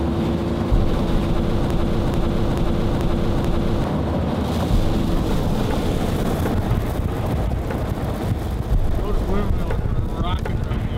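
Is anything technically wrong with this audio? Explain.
Yes. From 1.70 s to 3.84 s there is a broken-record loop: a fragment of about 0.44 s plays five times back to back, identical each pass, and whatever should have sounded during those two seconds never arrives. This is likely a stalled player, encoder or stream resending the last chunk it held. On a waveform the same shape tiles exactly every 435 ms; a spectrogram shows a stamped, repeating block with abrupt seams at each restart.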